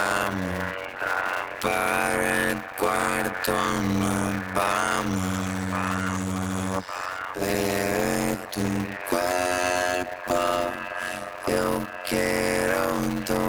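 The audio carries a block size mismatch (padded) from start to finish. A steady buzz near 91.9 Hz runs under everything, and the material plays at 0.533 times its normal speed while keeping roughly its original pitch. That fits one stage writing 256-sample blocks into a stage reading about 480, with zeros filling each remainder. On a waveform, regular flat silent gaps recur every 10.9 ms. A spectrogram shows evenly spaced vertical gaps and harmonic lines at multiples of 91.9 Hz.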